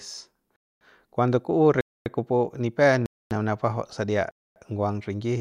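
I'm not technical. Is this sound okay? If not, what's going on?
No. The speech drops out for a quarter second at 0.56, 1.81 (just after "ku'u re"), 3.06 and 4.31 s. This is a gap between chunks: the audio arrives in one-second pieces with silence inserted at each join.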